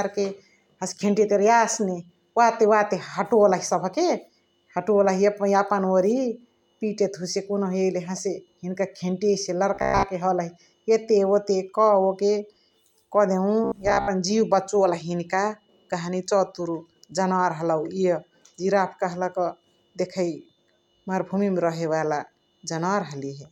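At 9.74 to 10.07 s and again at 13.64 to 14.08 s the speech goes robotic, a rigid metallic buzz near 66.7 Hz, likely from repeated short buffers of about 15 ms.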